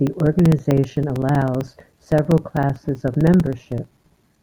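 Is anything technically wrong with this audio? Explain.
Yes. From 0.07 to 4.36 s, periodic USB or driver dropouts silence roughly 4 ms every 64 ms as the bus stalls, giving steady ticks through the speech.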